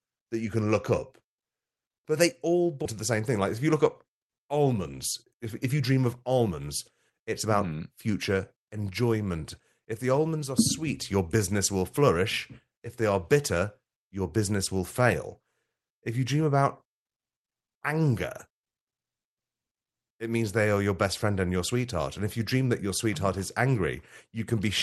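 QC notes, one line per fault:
4.66–6.68 s and 7.10–7.54 s, jitter buffer speed-up: the speech plays about 8% and then 9% fast at unchanged pitch, ending just before "mm future enjoyment". The receiver trimmed repeated pitch-period fragments, around 200 ms in total and then about 50 ms more, to drain excess buffered delay, so the delivery sounds briefly hurried.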